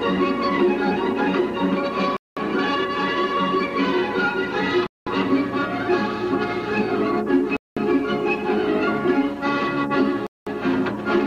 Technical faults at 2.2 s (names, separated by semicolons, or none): gap between chunks